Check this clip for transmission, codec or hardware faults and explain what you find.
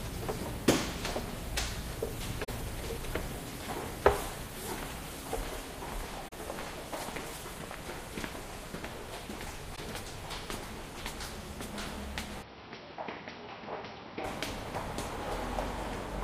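Two kinds of fault are present: three brief muted gaps from lost AAC frames, and a stretch where the sound is captured through a poorer input device.

AAC frame loss with muting, at 2.44 s, 6.28 s and 9.75 s: the sound fades into a soft-edged hole for the first two and a brief dip for the third, lasting about 43 ms for the first two and 21 ms for the third. That points to two lost frames and then one. The decoder zeroed the missing spectrum, and its overlapping windows smoothed the edges.

Input switched to a poorer device, from 12.42 s to 14.24 s: the sound turns dull and a few decibels quieter, with nothing above 5.8 kHz. A new noise floor sits roughly 30 dB below it, and there is no gap at the changeover. The likely cause is the system moving to a narrower-band microphone or headset profile.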